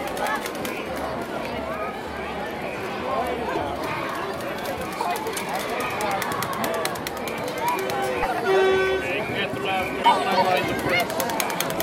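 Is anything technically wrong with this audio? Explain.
Yes. There is damaged data in the compressed stream at 3.52–3.57 s, 5.37 s, 8.19–8.25 s and 9.99–10.05 s. Corrupted bytes make the decoder misread frames and lose sync while it hunts for the next valid header, producing brief chirps or squawky blips of about 20 to 60 ms.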